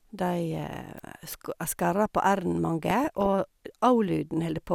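From 0.62 to 0.83 s, DAB burbling disturbs the speech: residual bit errors corrupt samples and scale factors, so sub-bands blip and jump in level frame by frame. At 0.98 s an electrical switching spike adds a sharp, broadband snap on top of the sound, likely a nearby switch arcing, with no chirping texture. DAB burbling returns from 2.88 to 3.27 s.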